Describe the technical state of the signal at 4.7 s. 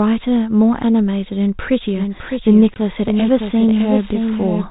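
A second copy of the audio, likely captured again through a slower path, is mixed in from 1.95 s and still running at 4.7 s: a doubled audio track. It trails by roughly 0.7 s, about 5 dB quieter, heard as a dry, undecaying echo over the speech.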